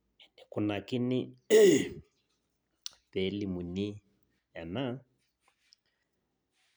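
No technical faults are audible anywhere in the recording.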